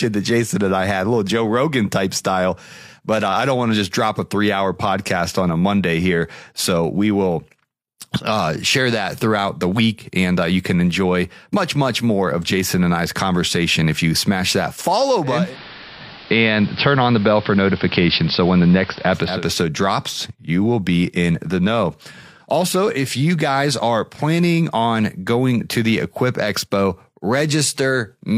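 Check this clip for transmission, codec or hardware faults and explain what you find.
One fault is present: digital radio blending to analogue, from 15.21 to 19.48 s, beginning after "you smash that follow" and ending before "drops you will be". The receiver lost its digital stream and cross-faded over 362 ms to the AM broadcast. Hiss appears roughly 25 dB below the speech, and the level changes by about 3 dB. A codec narrowing its bandwidth would not bring in that steady hiss.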